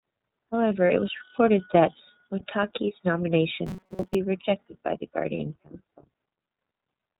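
Throughout, the speech sounds band-limited and slightly rough and synthetic, with nothing above 4 kHz and a plainly audible coded quality. This is the iLBC codec, a narrowband VoIP coder that handles each frame independently. The character fits its 30 ms frame mode at about 13.3 kbps, where the simplified excitation model strips away natural texture.

From 0.87 to 0.90 s, a brief held, faintly buzzy vowel replaces the speech before it snaps back cleanly. These are lost iLBC frames. A 30 ms gap, which fits a single lost frame, was concealed by repeating the last pitch cycle mixed with noise. Because the next frame decodes without depending on earlier ones, the speech is correct again right away.

From 3.66 to 4.15 s, the speech turns into a rigid, metallic buzz at 188 Hz that still loosely tracks the speech contour. This is robotic sound from repeated short buffers. New audio likely arrived too seldom, so the playback path looped a stretch of about 5.3 ms, giving the 188 Hz tone. 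Most of the real audio in that span, roughly seven tenths, was skipped.

From 5.37 to 5.40 s, another lost iLBC frame gives the same short held, breathy vowel lasting 30 ms. The speech then recovers immediately.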